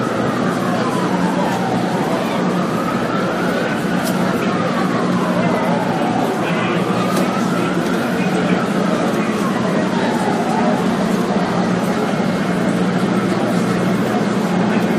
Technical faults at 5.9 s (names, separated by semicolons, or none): none